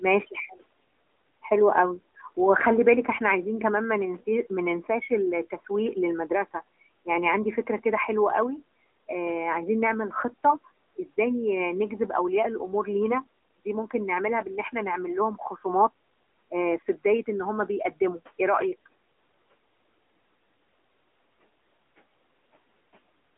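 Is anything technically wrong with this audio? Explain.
Yes. Throughout the clip, the speech sounds thin, boxy and plainly buzzy. Nothing above 3.8 kHz comes through, and the main band sits between 250 Hz and 3.4 kHz. This is the AMR narrowband mobile codec: the voice is rebuilt from a vocal-tract model at a low bitrate, which fits the 10.2 kbps mode. The quiet room noise, about 26 dB below the speech, picks up a synthetic swirl.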